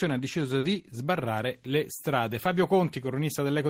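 At 0.59 to 0.66 s there is a short concealed packet loss. About 40 ms of the speech never arrived at the decoder in time. The receiver covered the gap by extending the sound just before it, then blended back into the real signal. The patch is heard as a brief smear in the speech, a small wobble where the sound holds unnaturally still. The blend back into the real audio ends the glitch.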